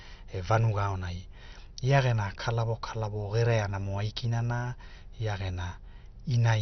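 A speech clip with MPEG Layer II damage throughout, likely MP2 compression at a starved bitrate, which fits roughly 48 kbps. Nothing survives above about 6.1 kHz, so the voice is dull, and the bands that remain are coarsely quantised, giving a gurgling, granular roughness as upper sub-bands flicker on and off. That grainy, band-switching texture separates it from a plain low-pass filter, which would sound muffled but clean, and from MP3's swirly, watery artefacts.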